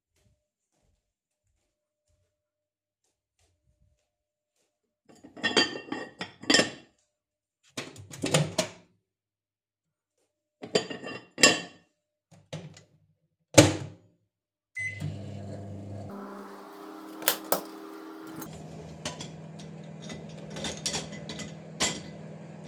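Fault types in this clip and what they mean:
Section at the wrong speed: A stretch was likely run against the wrong clock, playing at twice its recorded speed. From 16.1 to 18.46 s the sounds rush past and jump up in pitch by roughly ten semitones, then drop back to normal speed.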